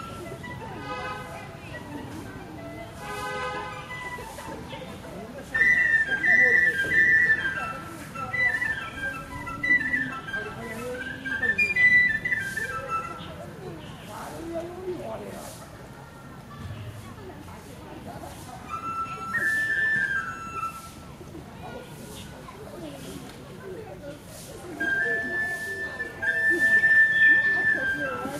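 No dropouts, clicks, distortion or level problems turn up anywhere in the recording, and the sound runs without a technical fault.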